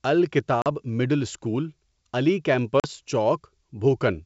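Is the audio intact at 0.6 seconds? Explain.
No. Packet loss on an ADPCM call drops about 40 ms, roughly two packets, from 0.62 to 0.67 s, knocking the decoder's predictor and step size out of step. A hard-edged silent hole results, then speech returns slightly distorted, settling within tens of milliseconds.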